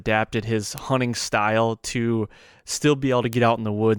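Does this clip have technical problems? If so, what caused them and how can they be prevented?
Yes. Two bit error spikes are audible in the speech, at 0.78 s and 3.33 s, each a lone sharp tick. In each case a single flipped bit threw one sample to about -2 dBFS before it returned at once. On a waveform each shows as a one-sample needle; on a spectrogram, a thin vertical line across all frequencies. To prevent it, use error-checked memory and digital links, and verify file integrity with checksums.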